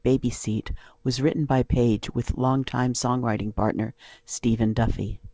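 There are no technical faults to describe in time order in this speech.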